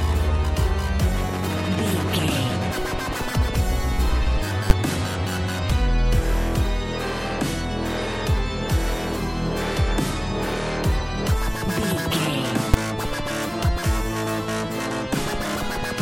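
Processor overload crackle runs from 3.23 to 3.46 s. Around seven short buffers, each roughly 3 ms, miss their deadlines and are skipped, leaving hard-edged gaps heard as gritty crackle. Invalid numbers at full scale strike at 4.7 s and 12.74 s: a calculation produces invalid values that pin the output to one extreme value for about 10 ms and 5 ms, each heard as a single loud bang.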